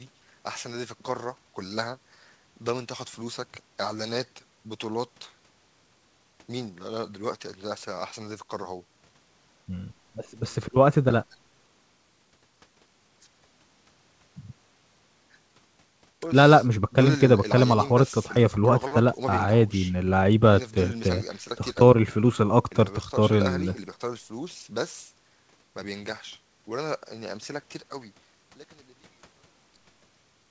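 No technical faults can be heard in this speech.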